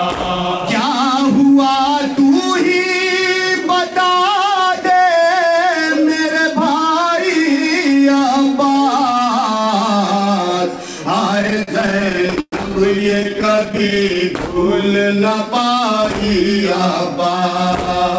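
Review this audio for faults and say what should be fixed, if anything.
Repeated stalls (stutter), 11.38–12.54 s and 12.92–14.22 s: packets arrived late, so the jitter buffer kept running dry and the receiver stretched the last sound, dragging and stuttering the audio. Waits reach about 0.12 s in the first span, with roughly a quarter of each span filled in, though nothing is actually lost. Prevention: give the jitter buffer more headroom, or fix the network delay variation feeding it.

Jitter buffer slow-down, 14.30–15.92 s: right after the stalls, the buffer rebuilt its reserve by repeating single pitch periods, so the audio plays at 94% speed with unchanged pitch and adds about 0.1 s. Prevention: with steadier packet delivery the buffer would not need to refill this way.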